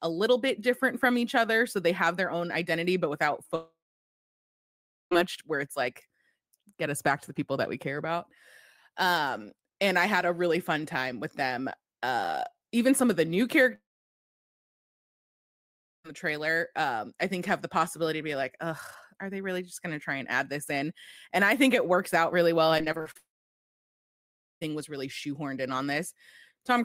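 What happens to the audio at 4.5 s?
At 4.5 s the speech is inside a gap from 3.55 to 5.13 s, likely a long network dropout. After "own identity but without", the last sound smears into a fading buzz. Then about 1.4 s of silence follows. Speech returns at "much where it's like", with about 1.6 s lost.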